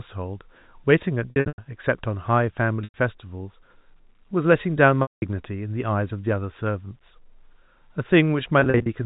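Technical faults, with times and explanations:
1.30–1.58 s, 2.84–2.94 s, 5.02–5.22 s, 8.60–8.86 s, packet loss with pitch repetition: chunks of the speech drop out, about 220, 100, 200 and 140 ms respectively, which fits 20 ms packets. The receiver loops the last pitch cycle to cover each hole, so the brief gaps come across as a held, buzzy tone. The 100 ms run and the solid 200 ms one fade to silence before the speech cross-fades back in, a bit thin through the G.711 telephone band.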